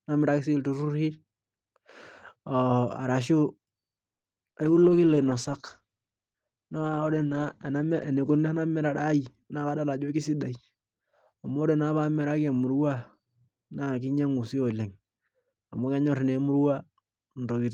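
At 4.17 to 4.35 s there's a short stall from a late packet: the buffer ran dry, so about 60 ms of the last sound gets stretched, then resumes with nothing lost.

Right after, at 4.52 to 4.56 s, a short concealed packet loss: 20 ms never arrived, and the receiver papered over it, leaving a quick smear or wobble in the speech.

From 4.66 to 10.13 s comes a call bitrate drop, 32 kbps down to 12 kbps, with bandwidth falling from 20 kHz to 8 kHz. The speech goes muffled and rough, bottoming out for about 2.7 s.

Inside that, at 9.04 to 9.80 s, there's a jitter buffer speed-up: it trimmed around 70 ms of pitch periods, so the speech runs at 108% speed, same pitch but hurried.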